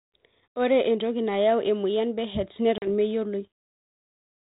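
At 2.78 s the speech drops into a hard-edged silence that ends at about 2.88 s. This is packet loss on an ADPCM call. Around 40 ms of audio, roughly four packets, never arrived and was filled with silence. ADPCM decodes each sample as a difference from an adaptive prediction. The gap leaves the receiver's predictor and step size out of step with the sender's. Speech resumes with brief, slight distortion, and settles within some tens of milliseconds. The 32 kbit/s G.726 coding around it keeps its narrow telephone band.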